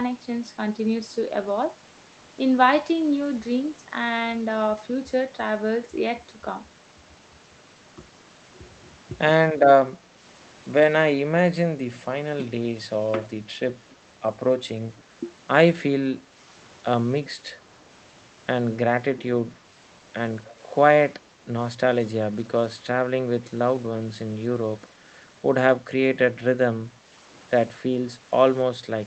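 Around 9.92 to 10.22 s the speech dips by roughly 5 dB for a short total of well under a tenth of a second. This is speech suppressed in double talk. The likely cause is an echo canceller that heard both sides at once. It could not tell the near talker from loudspeaker echo, so it pulled the level down. The same brief dip returns at 16.25 to 16.41 s, 21.75 to 21.79 s and 27.92 to 27.96 s. Each time it lasts a fraction of a second and sounds like a small hole in the voice.

At 14.97 s a faint echo leak appears. A copy of the speech returns about 282 ms late. It sits at about 35 dB below the voice, so it is only a quiet, brief ghost. The likely cause is an echo canceller on a loudspeaker end that failed to remove everything its microphone picked up. That remnant was sent back down the line.

From 21.28 to 21.43 s the room sound drops by about 6 dB. This is background gated by the echo canceller. 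While the loudspeaker played, the canceller turned the microphone down hard. The ambient noise thins out for about 150 ms and then comes back. It happens again at 26.95 to 27.06 s, lasting about 100 ms. Both sound like a momentary hollow in the background.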